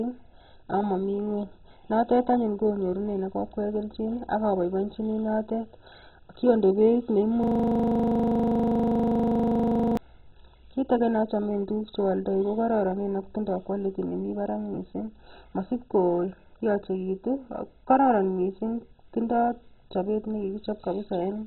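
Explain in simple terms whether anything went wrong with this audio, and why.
The whole speech clip sounds dull and gurgly, with nothing above 4 kHz, which likely comes from heavy MP2 compression. Missing upper bands, not just muffling, give it away.

From 7.43 to 9.97 s, a system hang loop repeats one 40 ms slice 25 times a second, making a steady buzz. The exact repetition distinguishes it from ordinary crackle or dropouts.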